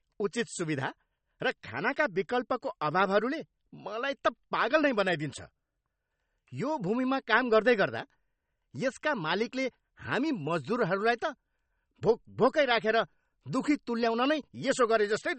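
Speech that was likely encoded as MP3 at a very low bitrate, around 35 kbit/s, and later saved again at a high bitrate such as 192 kbit/s: low-bitrate audio saved at a high bitrate. Nothing is present above 8.4 kHz for the whole clip, and the first encoding's smearing and dullness remain, which the larger file cannot restore.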